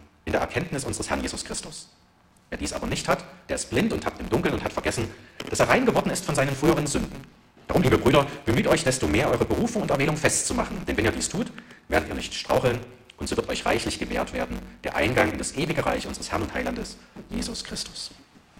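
From start to finish the audio is overlaid by a steady buzz at about 138 Hz and moves roughly 1.6 times faster than it should, yet its timbre stays. This is a block size mismatch (truncated). One stage writes blocks longer than the next stage reads, which fits 512-sample blocks being cut short, so the tail of every block is discarded. The regular seams cause the buzz, and the missing material causes the speed-up.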